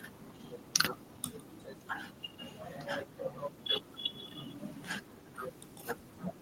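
A speech recording with an echo leak, likely from a loudspeaker on the far end whose echo canceller let some of the voice back through. From 1.58 to 1.65 s a faint scrap of that voice returns about 359 ms late, well below the live speech.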